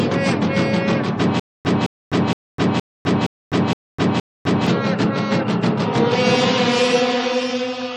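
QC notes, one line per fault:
1.40–4.67 s, stutter with silent gaps: playback likely stalled and retried, replaying the same 214 ms burst seven times with 253 ms of digital silence between, so that stretch of audio is lost.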